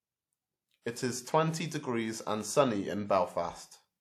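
Pre-echo from 0.82 to 0.86 s in this speech clip: a brief hiss of about 46 ms precedes the attack on "is twenty degrees and", as transform-codec quantisation noise smears ahead of the onset.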